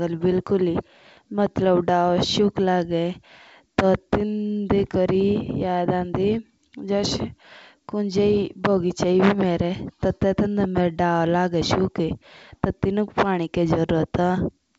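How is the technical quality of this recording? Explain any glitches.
No audible faults or glitches.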